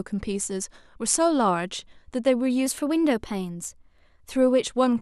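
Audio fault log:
2.66–4.32 s, drift correction step: the speech suddenly runs about 6% fast and rises by roughly a semitone (104 cents), with speed and pitch moving together, then drops back to normal at 4.32 s. Because tempo and pitch shift as one, the audio was being played back at a different rate, not pitch-shifted. This is likely a clock-matching stage changing its playback rate in a single step to drain or refill its buffer, then returning to the nominal rate.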